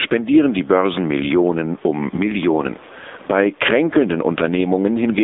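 Right from the start and all the way through, the level keeps getting pulled down whenever the talker gets loud, with the room noise sitting about 37 dB under the speech. That's gain pumping, with the level swinging by something like 10 dB. The likely cause is input gain set way too hot, with a fast limiter or compressor clamping down on each loud syllable. The result is that quiet and loud parts land close together and everything sounds squashed.

Also running the whole length is the AMR narrowband mobile codec, the old 2G/3G speech coder. It rebuilds the voice from a vocal-tract model fed with a handful of pulses per frame, and what survives is just a phone-line band from 250 Hz to 3.7 kHz. The damage is plainly audible: buzzy, synthetic-sounding speech, with the background smeared into a watery warble, which fits the low 7.4 kbps mode.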